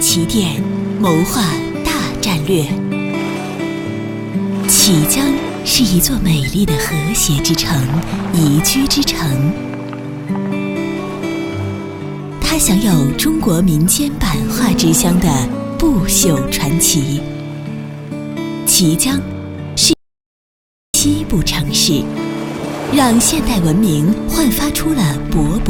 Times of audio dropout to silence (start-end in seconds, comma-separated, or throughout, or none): 19.93-20.94